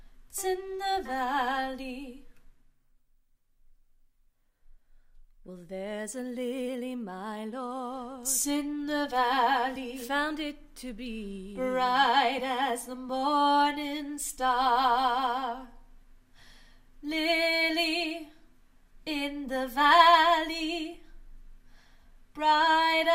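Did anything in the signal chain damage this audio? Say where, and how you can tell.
No, nothing in the chain damaged it.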